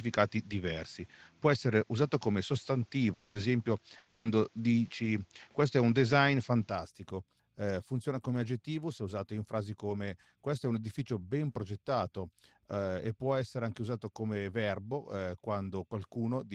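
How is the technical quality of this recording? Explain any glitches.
The recording has several audible glitches: a dull first section, two covered-over dropouts with short rebuilt frames, and two clicks.

From the start until 6.70 s the speech is band-limited, with a slightly different level (about 5 dB) and a faint noise floor about 40 dB down. It then clears with no gap. This fits the input having likely been switched to a poorer device, which differs from a codec change because the tone, level and noise all shift together.

Between 3.13 and 3.38 s and between 3.97 and 4.28 s the sound smears into a fading buzzy continuation, 220 ms and then 280 ms long, but never falls silent. This is a long network dropout, likely, with the receiver extending the last sound because nothing arrived. Unlike packet loss with forward error correction (FEC), the original speech for that stretch is gone.

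At 3.35 s and 4.25 s, right at the end of each dropout, there is a 20 ms frame that sounds rougher and noisier but leaves no gap. These are lost packets rebuilt from error correction, where the decoder played a low-bitrate backup copy carried in the next packet, so the content survives in degraded form.

Single sharp clicks at 0.84 s and 8.36 s, the second just before "aggettivo se usato in", are dropped samples. Likely only a tiny fraction of a millisecond was skipped, making the waveform jump. Nothing audible is missing, which separates them from a dropout.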